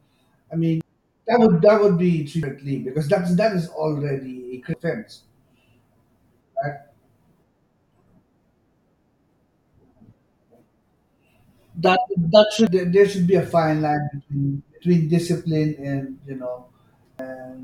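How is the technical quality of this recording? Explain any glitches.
The speech is marked by five brief glitches from damaged data in a compressed stream, at 0.81, 2.43, 4.74, 12.67 and 17.19 s. The one at 2.43 s falls between "would that would be" and "because that's that is", the 4.74 s one follows "that is already a", and the 12.67 s one precedes "there there should be". Each is a short chirp or blip: corrupted bytes make the decoder misread a frame, lose sync and jump ahead to the next valid header.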